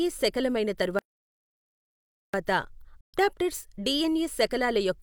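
A speech recording with two separate interruptions. At 0.99 s the player most likely starved of data or had its output thread blocked, producing a playback stall: the speech stops abruptly mid-flow and the output stays silent for about 1.35 s, until 2.34 s, when it picks up again. Because nothing was fed to the output during that wait, the gap is a complete hole rather than a dip in level. Later, from 3.01 s to 3.18 s, a digital broadcast dropout occurs. The receiver lost valid frames and muted until clean ones arrived, so the speech fades out over about 3 ms, nearly a hard cut, and returns after roughly 128 ms of missing material. That span fits about three lost frames, and whatever was transmitted in that window is gone rather than delayed.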